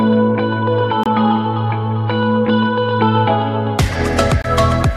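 At 1.03 to 1.06 s, then again at 4.42 to 4.45 s, the sound briefly cuts out. Each is a digital broadcast dropout. The receiver muted after a bad frame, losing about 24 ms, which fits a single lost frame. The sound resumes later.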